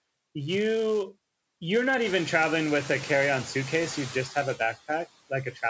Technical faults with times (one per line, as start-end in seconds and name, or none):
0.00-5.69 filter restarted on every block
0.00-5.69 noise suppressor artifacts
5.29-5.63 speech cut by the noise suppressor